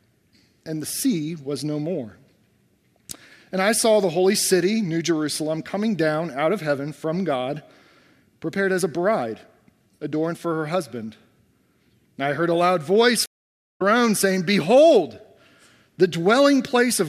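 A stream reconnect interrupts the audio from 13.26 s to 13.82 s. The sound drops to silence for about 0.49 s as the connection breaks, and the player reestablishes it and starts a new decoder partway through the stream. Playback does not pick up where it stopped: it resumes roughly 0.3 s further on, so a short stretch of the material is skipped, consistent with a live stream that kept advancing during the outage.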